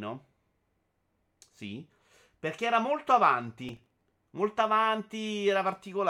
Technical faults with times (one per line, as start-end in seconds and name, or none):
3.69-4.12 processor overload crackle